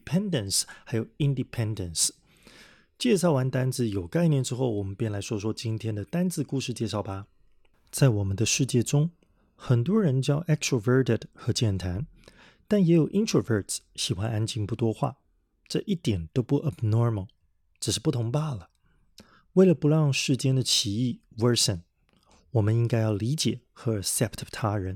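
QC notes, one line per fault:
throughout: sample clock jitter. Timing error of roughly a microsecond or two scatters the sampling instants, leaving a grainy hiss about 35 dB below the speech that swells on loud, bright sibilants and disappears in pauses, unlike steady background noise.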